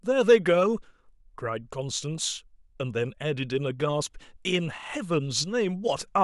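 Listening through the speech, nothing stood out as a technical problem at any point.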